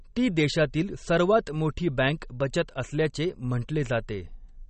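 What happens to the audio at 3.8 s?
MP3 compression damage is audible at 3.8 s, as it is through the whole recording. The speech has nothing above about 8.4 kHz, and the faint parts of its spectrum flicker in and out from one short frame to the next, likely because an MP3 encoder short of bits, fitting a rate near 32 kbps, cut the treble and dropped weak frequency lines. The result sounds watery and swirling, with metallic chirps on s sounds and blurred onsets.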